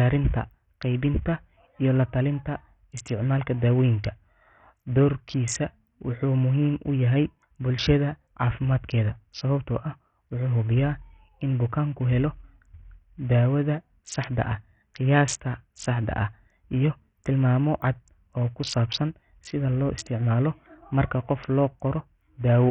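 Bluetooth SBC compression runs through the whole speech clip, likely from a very low SBC bit pool, around 48 kbps by the sound of it. Starved upper sub-bands lose their bits, so the treble drops out and flickers while gritty quantisation noise and aliasing ride on the speech.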